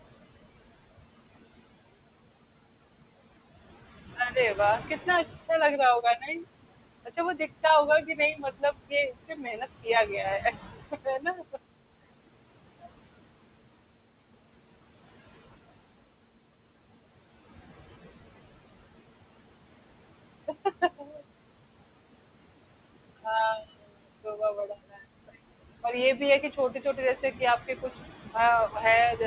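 Noise suppressor artifacts run through the whole clip. The suppressor treats the room noise, which sits about 14 dB below the speech, as steady noise and pulls it down by about 21 dB, frame by frame. The background drops away in the gaps and comes back up under each phrase. The call's G.711 path stops everything above 4 kHz, which gives a narrow, dull sound.

Speech cut by the noise suppressor happens five times, where the suppressor mistakes parts of the speech for noise and turns them down with the background. At 6.02 to 6.3 s, a brief stretch of about a tenth of a second drops by up to about 16 dB. From 7.05 to 11.58 s, the longest run, roughly a second and a half of speech is pulled down in pieces, at worst by about 21 dB. From 20.47 to 21.24 s, about a third of a second loses up to about 18 dB. From 23.24 to 25.3 s, around half a second is cut by up to about 22 dB, the deepest in the clip. 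From 25.83 to 29.19 s, about a third of a second dips by up to about 10 dB. In each case the affected speech sounds swallowed or faint.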